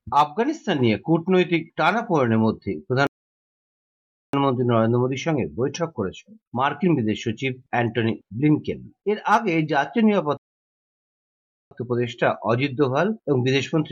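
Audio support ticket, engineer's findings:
Rebuffering stall, two events. Playback drops to silence at 3.07 s, resumes at 4.33 s; again at 10.37 s, resumes at 11.71 s. Gaps about 1.27 s and 1.34 s. Sound picks up exactly where it stopped, nothing skipped, timeline extended. Probable component: client player buffer. Mechanism: downloaded audio exhausted before next segment arrived, playback halted until data refilled. Points to network throughput or buffer sizing.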